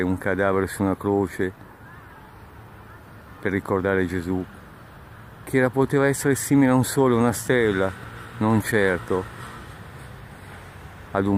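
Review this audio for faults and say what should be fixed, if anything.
A background task is periodically blocking the USB bus or audio driver, causing periodic USB or driver dropouts. About every 1.02 s from 0.32 s to 10.55 s, roughly a millisecond of audio becomes silence, heard as about ten evenly spaced ticks. To prevent it, find and stop the polling process or raise the buffer size.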